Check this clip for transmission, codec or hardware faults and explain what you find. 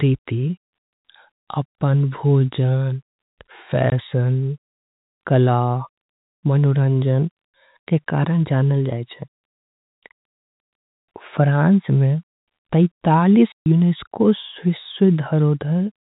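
There is packet loss filled with silence, a transmission fault, in two places. The first gap runs from 3.90 to 3.92 s and lasts 20 ms. The second runs from 13.52 to 13.66 s and lasts 140 ms, which fits seven consecutive 20 ms packets. Lost packets were replaced with digital silence, so the speech drops out abruptly with hard edges. On a waveform these appear as flat silent stretches. On a spectrogram they show as clean vertical blank bands. The narrowband G.711 telephone coding cuts everything above 4 kHz.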